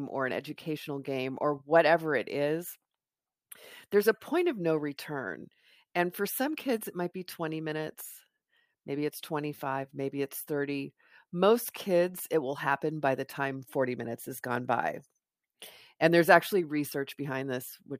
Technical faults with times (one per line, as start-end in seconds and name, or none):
none